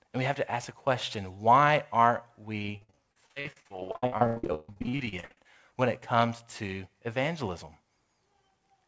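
From 2.59 s to 5.45 s the speech breaks up under repeated packet loss, producing a robotic sound. Dozens of short dropouts, the longest about 138 ms, arrive in quick succession, and each is patched by stretching the last received sound, so roughly half of that span is concealment rather than real signal. The result is choppy, robotic speech with pieces missing. The call path's band limit, with nothing above 8 kHz, fits a G.722 wideband codec.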